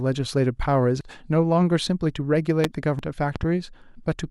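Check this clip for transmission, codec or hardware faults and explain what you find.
Two kinds of fault are present in this speech clip: damaged data in the compressed stream, and loud pops.

Damaged data in the compressed stream appears from 1.01 to 1.04 s and again at 2.99 s. Corrupted bytes make the decoder misread frames, lose sync and hunt for the next header, giving a short chirp or blip. Unlike a pop, it replaces the sound rather than sitting on top of it.

Loud pops come at 2.64 to 2.67 s, a single pop roughly 20 dB above the speech, and at 3.36 to 3.46 s, two quick pops roughly 10 dB above. The likely cause is a voltage step from a plug, switch, static or driver glitch. The speech continues underneath with no jump, which separates these from the codec damage.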